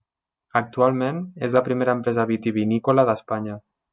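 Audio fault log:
No audible faults detected.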